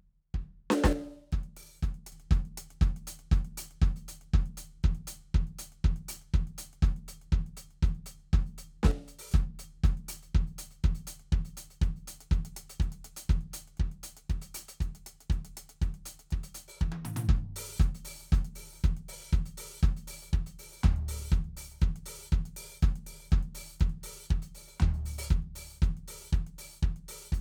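From 0.93 to 2.12 s and 8.91 to 9.31 s the music drops sharply by about 6 dB, a sudden waveform step, likely one channel dropping out.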